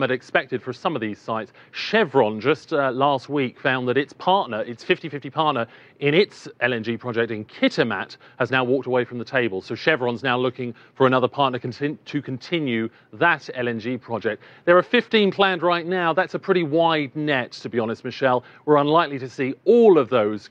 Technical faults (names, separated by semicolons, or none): none